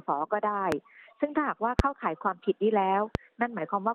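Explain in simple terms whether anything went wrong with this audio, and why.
Three sharp, loud pops burst over the sound at 0.72, 1.79 and 3.15 seconds. These loud pops are likely sudden electrical jolts, from a switch, static or a device glitch.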